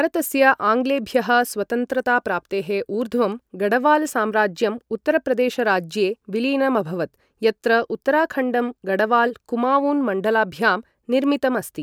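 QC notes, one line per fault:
Nothing to flag on this speech clip; no faults turned up anywhere in it.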